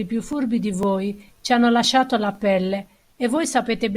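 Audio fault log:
0.33, 0.83, 1.34, 1.85, 2.35, 2.86 and 3.37 s, overlapping chunks: the speech was handled in half-second blocks, each beginning slightly before the previous one finished, so about 6.5 ms of audio plays twice at every join. That brief doubled slice breaks the waveform's continuity, heard as a click or stutter every 0.5 s, including just before "ci hanno" at 0.83 and 1.34 s and right after "la pelle" at 2.86 s.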